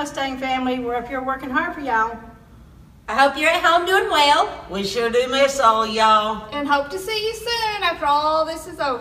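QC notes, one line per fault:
No faults found.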